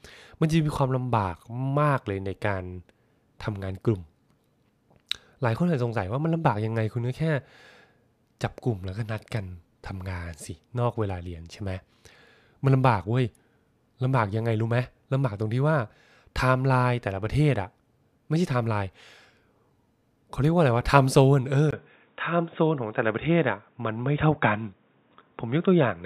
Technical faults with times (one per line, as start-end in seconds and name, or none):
21.71-26.05 input switched to a poorer device